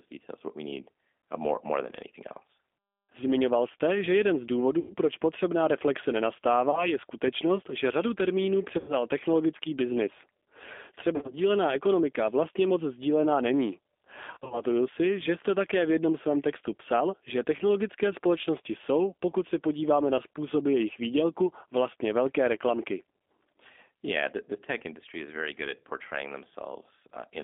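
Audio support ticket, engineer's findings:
G.729 codec, whole clip: line band about 250 Hz to 3.6 kHz, nothing above. Speech rebuilt from vocal tract filter, pitch predictor and sparse pulses at 8 kbit/s. Rough, synthetic edge plainly audible; consistent with G.729A.

VoIP packet loss concealed by the speech codec, at 4.79–4.94, 6.71–6.93, 8.79–8.96, 11.16–11.35 and 14.34–14.64 s. The decoder extends the last pitch and filter at falling gain, giving buzzy or noisy, fading fill. About 110, 20, 90, 90 and 130 ms lost; the last two losses are scattered. Voice stays weak after each gap.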